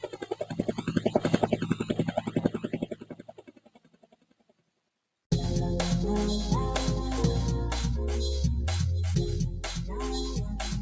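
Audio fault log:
Throughout: noise suppressor applied to music or sounds. A speech-tuned suppressor keeps treating sustained parts and tails as noise, so levels swing by around 20 dB and the sound pumps and thins. The call path's band limit, with nothing above 8 kHz, is normal.
0.0–1.2 s and 1.43–5.07 s: sound cut by the noise suppressor. Held material gets pulled down by about 14 dB, then about 19 dB, roughly a second and three seconds affected, while attacks mostly survive.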